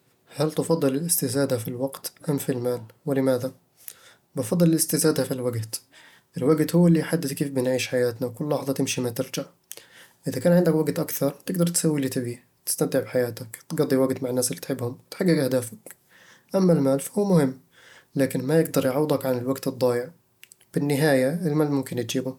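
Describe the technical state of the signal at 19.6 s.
At 19.6 s the speech signal is intact, with no audible fault at that moment.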